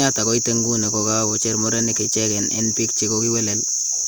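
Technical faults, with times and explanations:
No technical faults can be heard in this speech recording.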